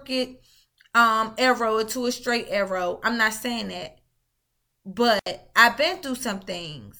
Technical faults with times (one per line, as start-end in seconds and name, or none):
5.18-5.27 intermittent contact